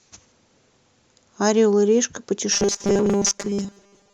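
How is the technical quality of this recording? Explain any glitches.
The recording has one clear glitch, robotic sound from repeated short buffers, from 2.52 s to the end at 4.13 s. The speech turns into a rigid, metallic buzz near 200 Hz that still loosely tracks the words. The likely cause is audio arriving too seldom, so playback loops a roughly 5 ms slice and most of the real speech is skipped.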